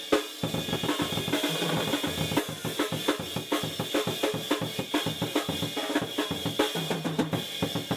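From 0.49 to 2.37 s the music has a doubled audio track. A second copy, about as loud as the first, trails by roughly a tenth of a second. It sounds like a dry slap-back with no room tail. It starts and stops abruptly. Likely a second, slower capture path was mixed in.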